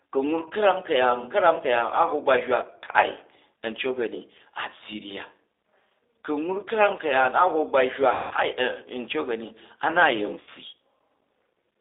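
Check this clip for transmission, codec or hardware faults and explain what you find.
The speech has two kinds of fault: a low-bitrate telephone codec throughout and four dropouts masked by that codec's concealment.

G.729 codec, throughout: the decoder rebuilds speech from a vocal tract filter, a pitch predictor and a few pulses per short frame. The sound points to about 8 kbit/s G.729A. The band sits roughly between 300 Hz and 3.7 kHz, so nothing bright survives. The codec damage is plainly audible as a rough, slightly synthetic quality in the speech.

VoIP packet loss concealed by the speech codec, at 0.48–0.52 s, 2.92–2.96 s (just after "ba hywa"), 8.13–8.34 s and 10.41–10.50 s: packets went missing, and the decoder filled each gap by repeating its last pitch and filter with falling gain. The gaps last about 20 ms, 20 ms, 180 ms and 60 ms. The two short ones fit about two lost 10 ms frames. 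In the 180 ms gap the last sound is stretched out and fades. Because each frame builds on the last, the speech stays weak or distorted for a while after each gap ends.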